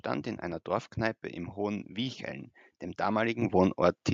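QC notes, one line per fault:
3.42 s, microphone volume stepped up: the speech and the background noise under it jump up together by about 8 dB in a single step, with no fade. That is what happens when the input gain of the capture device is raised once, partway through the audio, after the level was judged too low. On the waveform the envelope widens abruptly at that point. On a spectrogram every band, noise floor included, brightens at the same instant.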